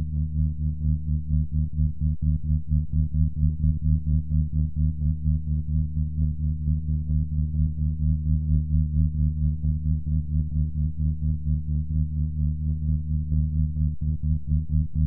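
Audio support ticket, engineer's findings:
Listened through the full recording and nothing stood out; no findings to log against any component.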